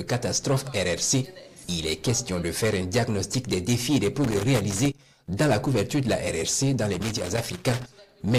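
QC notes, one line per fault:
4.24–5.06 s and 6.93–7.86 s, loose connector crackle: a worn contact breaks and remakes, chopping the sound and adding pops. The waveform shows jagged dropouts and spikes; the spectrogram shows scattered broadband vertical streaks.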